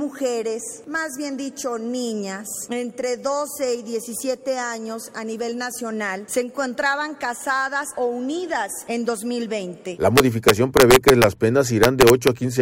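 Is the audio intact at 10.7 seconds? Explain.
No. At 10.7 seconds the audio sits inside a stretch of integer overflow running from about 10.18 to 11.24 s. The signal is driven roughly 1 dB past the largest representable value, and instead of being held at the limit, each peak wraps around to the opposite extreme. Those peaks come out as violent, sharp cracks, harsher than clipping. On a waveform the tops jump abruptly from one extreme to the opposite one, and a spectrogram shows bright broadband vertical streaks at each wrap.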